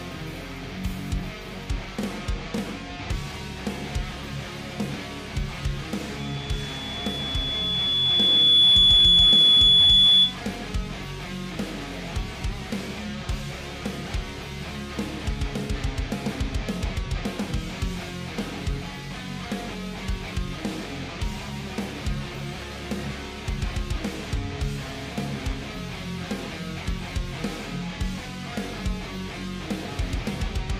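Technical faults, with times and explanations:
6.19–10.38 s, loudspeaker feedback squeal: a single 3.4 kHz tone swells over about two seconds to roughly 15 dB above the sound, self-sustaining through the mic-speaker loop rather than appearing at constant steady level.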